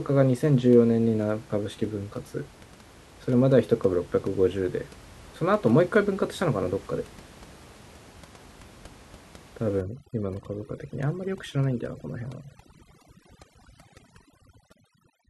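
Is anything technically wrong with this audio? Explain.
Yes. From 9.81 s to the end, the speech shows overdone noise removal. A noise reduction stage is set too aggressively, so frequency bands it judges close to the noise floor are pushed far down or cut out entirely. Softer parts of the speech are caught as well. The background drops and breaks up into twinkling specks. Before 9.81 s the room noise sits about 24 dB below the speech. Its collapse is what marks this as noise removal rather than a low-bitrate codec, whose swirling artefacts would not wipe out the background this way.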